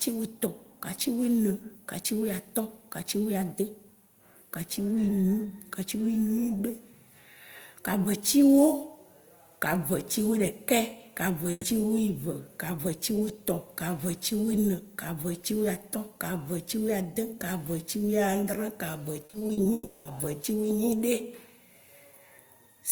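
At 11.51 to 11.65 s, a burst of packet loss left about 120 ms of speech undelivered. The receiver stretched the last sound into a held, fading buzz or hiss, followed by a brief 20 ms silence, and speech then resumes with that stretch missing.

From 19.25 to 19.67 s, repeated packet loss opens six short gaps, the longest 40 ms, each patched by continuing the preceding sound. Concealment covers about 38% of the span, so the speech turns choppy and robotic, with 160 ms of it missing.

From 19.73 to 20.07 s, the sound trails off into a fading buzz or hiss lasting about 320 ms, ending in a brief silence of roughly 10 ms, and then speech returns with that portion gone. The likely cause is a long network dropout, during which no audio reached the receiver.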